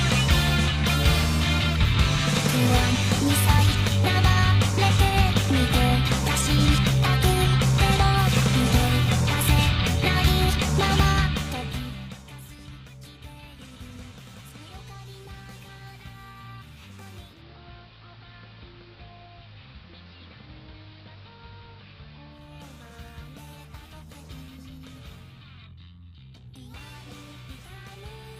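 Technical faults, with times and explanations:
17.17–22.56 s, digital radio blending to analogue: the digital stream drops and the receiver cross-fades over 0.26 s to the AM broadcast. The level falls about 4 dB, and hiss rises to roughly 30 dB below the sound.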